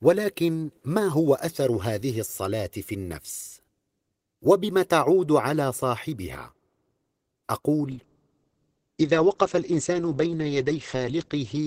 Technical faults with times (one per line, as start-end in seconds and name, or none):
7.92-11.67 call bitrate drop